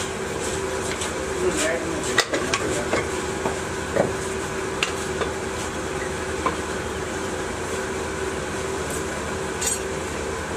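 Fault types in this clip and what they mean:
No technical faults can be heard anywhere in this clip. There is nothing to list under any fault type.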